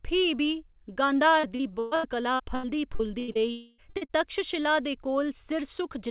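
From 1.4 to 3.38 s the speech turns choppy and robotic, with a stuttering texture. This is repeated packet loss: nine gaps, the longest 123 ms, each patched by stretching the preceding sound, so about 28 percent of that stretch is synthetic filler.

Between 3.51 and 3.81 s the sound collapses into a sustained buzz that fades without reaching true silence. The likely cause is a long network dropout of roughly 0.3 s, which the receiver bridged by extending the last audio rather than playing the lost material.

Right after, at 3.90 to 3.96 s, 3.97 to 4.04 s and 4.05 to 4.12 s, come three quick smeared wobbles. Each is a short concealed packet loss of about 40 ms, filled from the preceding sound and blended back. Throughout, the band stops at 4 kHz, which fits a G.711 mu-law call codec.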